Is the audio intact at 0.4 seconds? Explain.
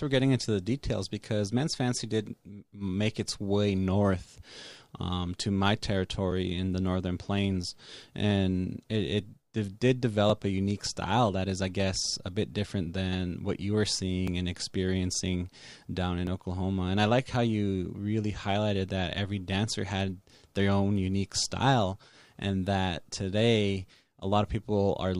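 Yes, at 0.4 seconds the speech plays through intact, with no fault at that moment.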